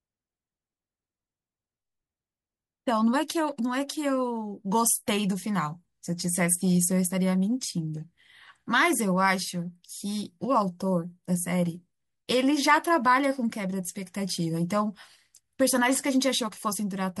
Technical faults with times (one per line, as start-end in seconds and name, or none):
none